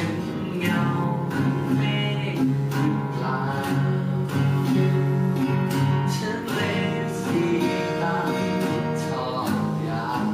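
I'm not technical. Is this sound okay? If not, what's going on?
No. A faint buzz runs underneath the whole clip, pulsing roughly a hundred times a second. This is computer activity noise: the computer's busy parts disturb the audio wiring. Unlike steady mains hum, it rises and falls with what the computer is doing.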